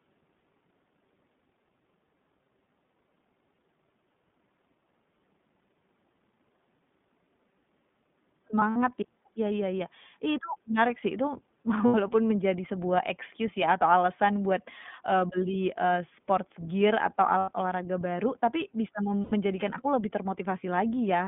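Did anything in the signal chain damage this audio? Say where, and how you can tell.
Yes. The codec stage left its mark on the whole clip. The speech is band-limited to roughly 150 Hz to 3.6 kHz and has a plainly audible rough, synthetic texture. That is the iLBC codec coding each frame's excitation independently, and it fits iLBC's 20 ms mode at 15.2 kbps.

On the network side, you can hear lost iLBC frames at 8.57–8.77 s, 11.86–11.95 s, 17.38–17.50 s and 19.24–19.32 s. Each gap sounds like a short held, buzzy vowel as the decoder repeats the last pitch cycle with noise. The first loss is scattered, with its longest run around 70 ms. The others run 80–100 ms, which fits four or five dropped packets.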